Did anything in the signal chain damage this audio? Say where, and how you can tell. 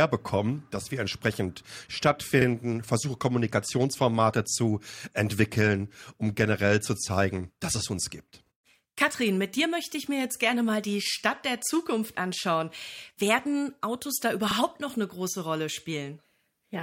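Yes, there's an overlapping chunks fault in the buffering or block-processing stage. At about 8.46 s this speech clip hiccups: a sliver of roughly 48 ms plays twice, ending around 8.51 s, so you get a quick stutter at the seam. That's a chunk boundary where the next block started before the previous one finished, so the tail gets replayed. It fits processing in 6.0 s chunks with a misaligned join.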